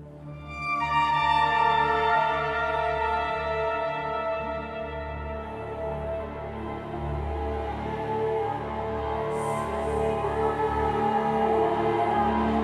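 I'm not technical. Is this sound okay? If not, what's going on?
Yes, no faults heard.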